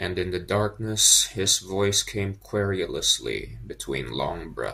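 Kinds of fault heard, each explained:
No kinds of fault are heard in this clip.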